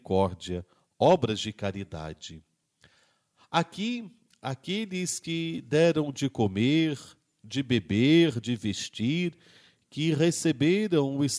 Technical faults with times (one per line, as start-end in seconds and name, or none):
none